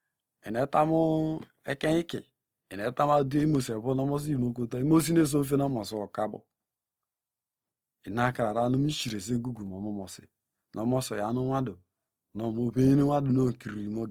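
Throughout, likely Opus compression in music mode, fitting a 24 kbps rate, fills starved bands with substitute energy, so the speech sounds plainly grainy and rough.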